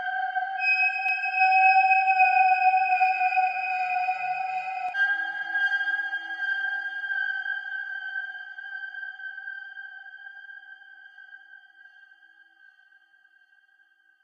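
A second capture path running late, or an edit holding two out-of-step copies, is the likely cause of a doubled audio track in this recording of everyday sounds. From 1.09 to 4.89 s, a dry, full-band duplicate trails roughly 300 ms behind, about 5 dB quieter, and starts and stops abruptly.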